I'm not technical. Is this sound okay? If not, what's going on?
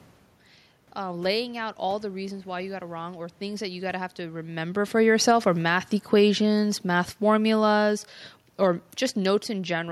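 No. From about 4.93 s to 9.87 s, the automatic gain falling fault occurs: the recorder's automatic volume control decided the input was too loud, or its background noise too strong, and kept turning itself down. So the speech steadily sinks in loudness over those five seconds, ending noticeably quieter, and the room's background noise fades along with it. The change in the voice's level around 4.5 s, when the talker shifts position, is just the person moving, not the system.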